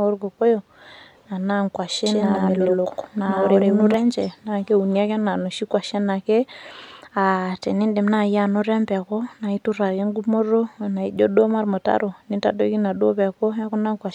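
From 2.06 to 3.94 s, a second copy of the speech is likely being captured through a slower path and mixed back in, giving a doubled audio track: a dry repeat roughly a tenth of a second behind, about equally loud, switching on and off abruptly.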